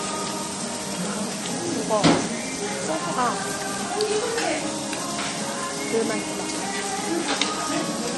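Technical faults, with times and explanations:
Throughout, MP3 compression: treble stops at 11.5 kHz and weak detail flickers watery, likely from an encoder short of bits, fitting roughly 40 kbps.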